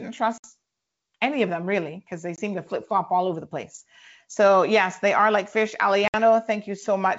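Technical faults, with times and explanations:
0.38–0.48 s, 2.36–2.39 s (between "them really because they" and "to flip flop all"), 6.08–6.15 s (after "they are like fish"): packet loss on an ADPCM call. About 60 ms, 20 ms and 60 ms of audio go missing, roughly a few packets, one packet and a few packets. Each gap appears as a flat, hard-edged silent stretch in the waveform and a blank vertical band on the spectrogram. After each gap the decoder's predictor and step size no longer match the sender's, so the speech comes back slightly distorted and settles within tens of milliseconds.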